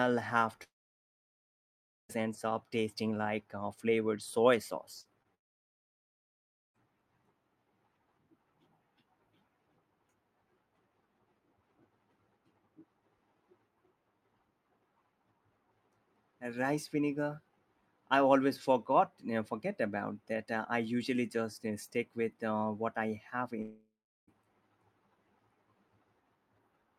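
From 0.63 to 2.11 s, just before "ends up tasting like", the incoming stream most likely stopped arriving in a long network dropout. The receiver stretches the last sound into a fading buzz for a moment. Then about 1.4 s of near-silence follows, and the speech resumes with that stretch gone.

Just after "like uh flavored soy", short concealed packet loss at 5.01 to 5.07 s, and again at 5.23 to 5.27 s, leaves a few hundredths of a second missing each time. The decoder patches each gap by continuing the preceding sound, which comes out as a brief smear or wobble.

Another long network dropout likely follows at 5.35 to 6.76 s, with the same fade into about 1.4 s of silence. A shorter one, likely also a dropout, after "uh what I have" runs from 23.62 to 24.29 s. There the fill gives way to about 0.34 s of quiet before the audio returns without the lost part.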